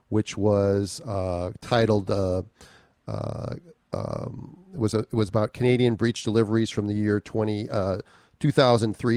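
The speech carries no audible technical faults.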